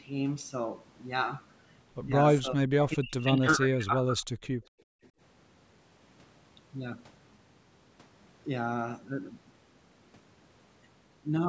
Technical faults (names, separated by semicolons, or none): speech suppressed in double talk; background gated by the echo canceller; echo leak